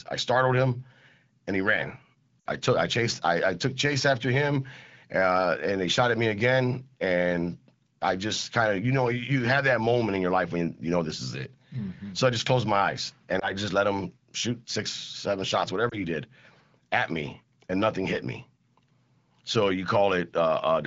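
At 2.40 to 2.47 s, just after "and he ran", lost AMR speech frames: about 60 ms, which fits three 20 ms frames, where the decoder stretches the last good sound and fades it, unlike a clean dropout.

From 2.60 to 9.47 s, sample clock jitter adds a fine hiss, some 25 dB below the signal, from timing wobble of a few microseconds. It swells on loud, bright sounds and vanishes in pauses, unlike steady background noise.

Single lost frames, each 20 ms, give brief warbles at 13.39 s, between "closed my eyes and" and "just let him", and at 15.89 s, after "six seven shots". Both sit over the faint, light coding texture of AMR-WB at 15.85 kbit/s.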